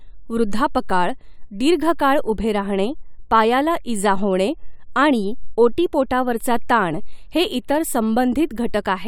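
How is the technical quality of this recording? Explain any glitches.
No technical faults are audible.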